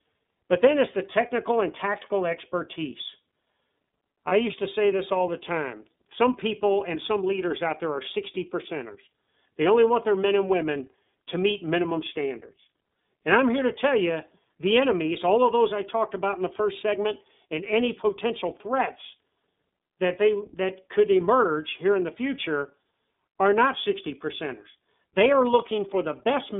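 The whole clip runs through the iLBC codec, and you can hear it straight away: the speech is squeezed into a narrow telephone band, roughly 250 Hz up to 3.7 kHz, so there's no air or sparkle on top and not much weight underneath. Each frame's excitation is coded on its own, which leaves the voice plainly rough and a bit synthetic. The character fits iLBC's 13.33 kbps mode with 30 ms frames.

At 4.28 to 4.32 s, just before "used to say this", there's a short patch of lost iLBC frames, about one 30 ms frame's worth. The decoder covers the hole by repeating the last pitch cycle with some noise mixed in, so instead of silence you get a brief held, slightly buzzy vowel. Since iLBC frames don't depend on each other, the voice snaps back cleanly right after.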